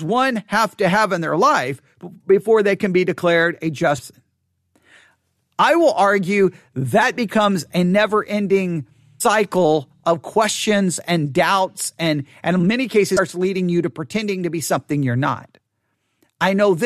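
Damaged data in a compressed stream produces brief glitches at 3.97 s (after "can be declared a"), 7.01 s, 9.2 s and 13.17 s, where the decoder lost sync on corrupted frames.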